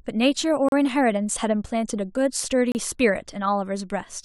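At 0.69 s and again at 2.72 s the speech drops into hard-edged silence for about 36 and 30 ms: gaps between stream segments, two seconds apart, where the segment timestamps leave a hole that the player pads with nothing.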